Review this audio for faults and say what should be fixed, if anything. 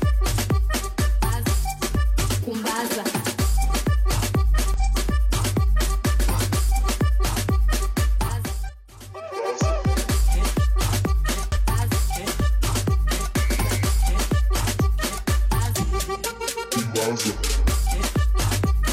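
Damaged data in a compressed stream causes brief blips at 4.74–4.79 s, 8.64–8.70 s and 11.52–11.58 s. Corrupt frames make the decoder lose sync and search for the next header. Prevent it with checksummed, error-checked transfer and storage.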